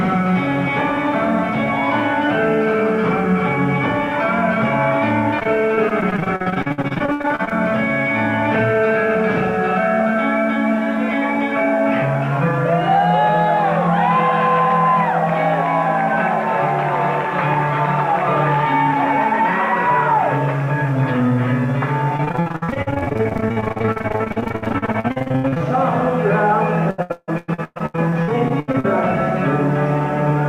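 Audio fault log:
5.39–7.53 s, 22.17–25.62 s and 26.90–28.86 s: repeated packet loss (robotic sound). Short stretches keep dropping out. Each hole is bridged by stretching the preceding sound, giving a choppy texture. Up to half of each span is patched, with holes reaching 160 ms.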